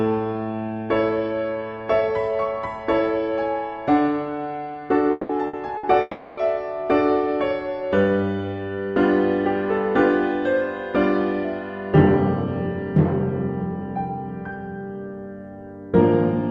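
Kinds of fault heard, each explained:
Long network dropout: At 5.11 and 6.01 s, the sound stretches into a fading buzz or hiss for about 180 and 360 ms, then resumes with material missing. Likely a long network dropout.
Burst of packet loss: At 5.47 and 5.77 s, about 60 ms goes missing. The receiver holds the last sound as a short, fading buzz or hiss, then skips ahead.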